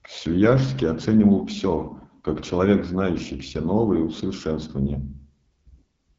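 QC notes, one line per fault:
Throughout: AMR wideband (HD Voice) codec. The speech has a rough, raspy, buzzy edge, and nothing is present above 7.5 kHz. This fits AMR-WB at one of its lowest rates, near 8.85 kbit/s, where too few pulses remain to model the voice cleanly.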